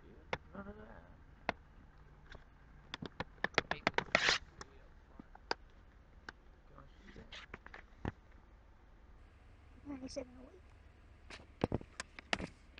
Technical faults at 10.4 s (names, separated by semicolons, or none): section at the wrong speed